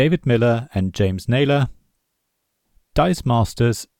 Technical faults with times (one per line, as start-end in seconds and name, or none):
none